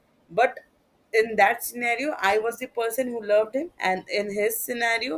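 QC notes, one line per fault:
No faults heard in this speech recording.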